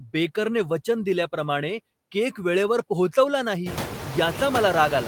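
Throughout the speech the background pumps, sinking between phrases and swelling back under them. These are noise suppressor artifacts: a frame-by-frame gain pulls down bands judged to be steady noise, here by about 10 dB. The room noise itself jumps by about 23 dB at around three and a half seconds, ending about 10 dB below the speech.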